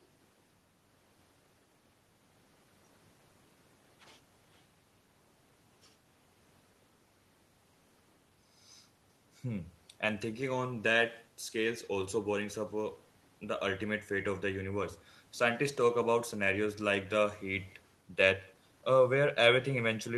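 Throughout the speech, an echo with no canceller trails each phrase by roughly 150 ms, sitting about 28 dB below the direct sound. The far end's loudspeaker output is reaching its microphone and returning unremoved, so every utterance is followed by a faint, thin copy.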